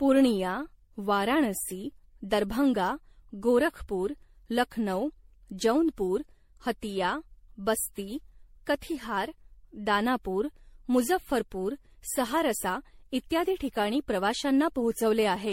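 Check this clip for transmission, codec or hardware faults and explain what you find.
The speech has a codec fault that lasts the whole clip, most likely generation loss from repeated MP3 encoding. From start to finish it sounds swirly, hollow and smeared, with consonant attacks blurred. The damage points to a 64 kbit/s MP3 chain run through around ten decode and re-encode passes. Each pass quantises again on a shifted frame grid, so the noise and dropouts pile up. On a spectrogram, nothing appears above 16.5 kHz, and the band below shows flickering holes and blocky smearing. On the waveform, transients look softened.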